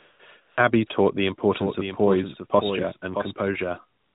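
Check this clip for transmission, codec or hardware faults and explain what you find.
Two faults are audible: AMR comfort noise in several pauses, and a doubled audio track through the middle of the clip. The speech has the 4 kHz ceiling of an AMR narrowband mobile link.

AMR comfort noise appears at 0 to 0.2 s, 0.42 to 0.58 s, 0.88 to 0.9 s, and 3.99 s to the end. In each gap the phone judged the talker silent and stopped sending speech frames. The receiver then made up noise from a rough summary of level and spectrum. The real background gives way to a smooth, steady hiss that switches in and out. The shortest gap lasts one 20 ms frame.

A doubled audio track runs from 1.45 s to 3.31 s. A second full-band copy of the speech trails the original by about 0.7 s, at about 10 dB lower. It has no decay and no room colour, so it is not an echo from a space. It starts and stops abruptly within the clip. 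The likely cause is a second, slower capture path mixed back in, or an edit holding two offset copies.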